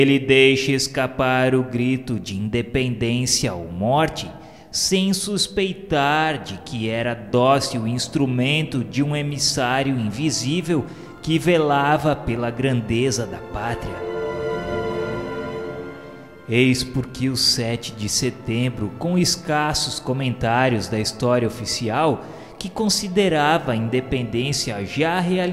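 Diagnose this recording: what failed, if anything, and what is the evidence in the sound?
No stage of the chain shows a failure: there are no dropouts, clicks, distortion, level jumps, pitch or timing errors, or noise bursts anywhere in the recording.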